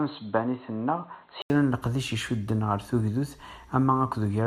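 Speech, and for the first second and a half it sounds like it's coming through a different, poorer pickup. From 0.0 to 1.5 s the band stops dead around 4.2 kHz, so it's dull and a bit boxy, sits roughly 5 dB quieter, and carries its own faint noise floor, roughly 40 dB down. Then there's a brief gap of about 80 ms before the fuller sound takes over. That's the pattern of an input switched to a poorer device, most likely a mid-recording hop from a headset or secondary mic back to the main one.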